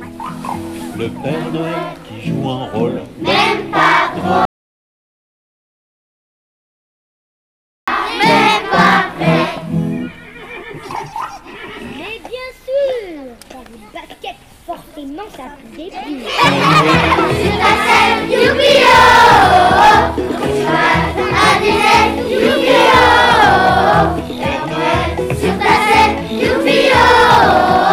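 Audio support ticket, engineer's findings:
Hard clipping, throughout. Peaks cut flat, crackle on the loudest moments. Input pushed about 4 dB past what the converter or gain stage can pass, so only a small fraction of samples actually hit the ceiling. Squared-off tops throw harmonics up high, hence the grit. Fix is upstream: back off preamp gain before the ADC.

Audio dropout to silence, 4.45 s to 7.88 s. Sound stops dead mid-flow, about 3.42 s of silence, no room tone at all, then resumes. Whatever played in that window is gone. Likely a lost input: device unplugged, link dropping, or a mute toggled while the recorder kept writing silence. Check cabling and mute state around that point.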